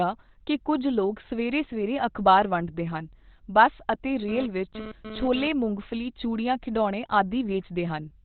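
Throughout the clip the speech is heavily damaged, muffled and hoarse, with nothing above 4.2 kHz. That sound points to Opus compression at a rate around 12 kbps, likely in its narrowband SILK speech mode. A spectrogram shows a flat ceiling cutting off all energy at that frequency.

From 4.29 to 5.48 s, between "ਵੰਡਦੇ ਹਨ ਬੱਸ ਅਤੇ" and "ਮੂੰਗਫਲੀ ਚੂੜੀਆਂ ਖਿਡੌਣੇ", a GSM phone buzz intrudes. This raspy 217 Hz buzz comes and goes, as during a data transfer, at about 11 dB below the speech. It is caused by rectified radio bursts. The spectrogram shows a comb of harmonics spaced 217 Hz apart, and the waveform shows pulses about 4.6 ms apart.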